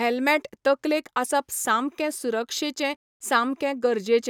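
Listening closely to this speech recording, nothing stood out as a technical problem at any point.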